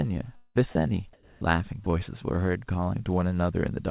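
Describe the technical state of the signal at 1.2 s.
Around 1.2 s, from 1.13 to 1.41 s, the real background drops out for a flat, featureless hiss about 4 dB off in level, likely comfort noise filling a discontinuous-transmission gap.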